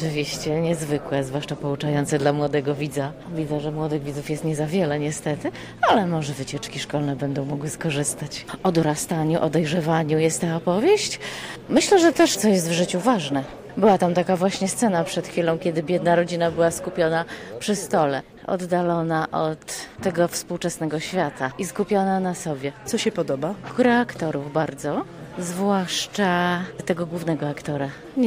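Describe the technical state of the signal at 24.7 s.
At 24.68 s there is a small forward jump in the sound, no gap of silence, just a seam where the audio skips ahead by roughly 3 ms. This is most likely a dropped buffer (overrun): the recording side failed to collect a block of samples before the hardware overwrote it, so that fragment was lost and the audio on either side was spliced directly together, producing an abrupt discontinuity.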